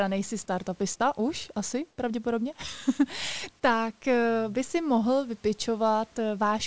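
Right after "nejsi startupista už asi", from 1.90 to 1.98 s, the background goes flat and featureless for about 80 ms and dips by about 2 dB. It's likely comfort noise in place of the background, filling a discontinuous-transmission pause with synthetic hiss.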